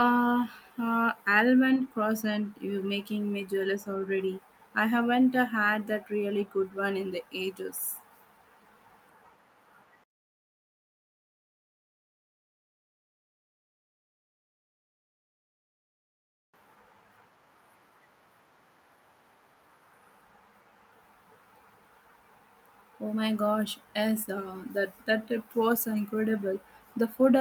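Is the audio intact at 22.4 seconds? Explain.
Yes, the speech at 22.4 seconds plays through intact, with no dropout, click, distortion or other fault at that moment.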